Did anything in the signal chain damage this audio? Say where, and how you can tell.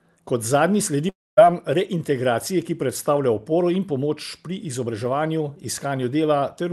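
Yes, at the network stage: a long network dropout from 1.09 to 1.39 s, likely packet loss. After "zadnji sledi" the last sound is stretched into a fading buzz, then silence, and audio resumes at "reintegracije ki predstavlja oporo" with about 280 ms missing. A spectrogram shows smeared harmonics decaying into a blank gap.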